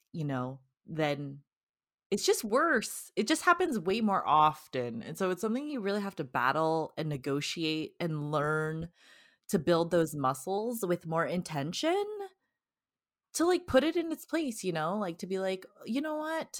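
A drift correction step is the likely cause: software keeping two clocks in line changed the playback rate in one jump and later restored it. From 4.20 to 5.70 s the speech plays 5.7% slower, dropping in pitch by 102 cents, about a semitone, before snapping back. From 10.58 to 12.17 s it runs 5.7% faster, rising by 96 cents, then returns to normal speed and pitch.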